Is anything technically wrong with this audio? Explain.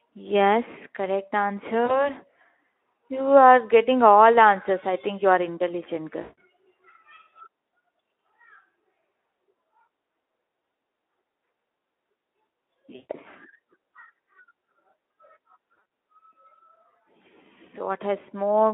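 Yes. VoIP packet loss concealed by the speech codec occurs at 1.85–2.09 s, 6.21–6.38 s, 12.95–13.11 s and 15.81 s, with gaps of about 40, 160, 140 and 100 ms. The last is scattered over 160 ms, with a longest run of 60 ms. The decoder repeats its last pitch and filter at falling gain, so the speech smears into a fading buzz. It stays weak briefly afterwards, within the narrow Speex band.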